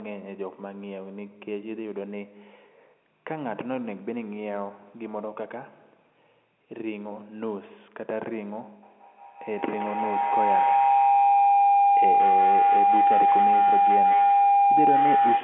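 From 8.83 s to the end, an acoustic loop gains on each pass, repeating about every 200 ms, producing feedback howl near 700 Hz that peaks about 9 dB above the speech.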